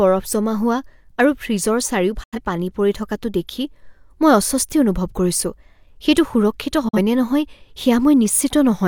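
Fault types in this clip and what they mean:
digital broadcast dropout: the receiver mutes while frames fail to decode, so the speech fades out within 8 ms into silence at 2.23 s and 6.88 s. The gaps of 85 ms and 43 ms fit two lost frames and one, and nothing conceals them.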